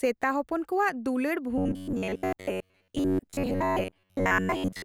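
Speech, and from 1.58 s to 4.84 s it collapses into robotic sound from repeated short buffers: the voice becomes a rigid metallic buzz at about 93.8 Hz that only loosely tracks the words, with most of that stretch being repeated material. The likely cause is audio arriving too slowly, so the player loops a fragment of roughly 10.7 ms while real audio is dropped. A waveform shows identical cycles repeating across most of that span; a spectrogram shows flat, evenly spaced harmonics on a 93.8 Hz grid.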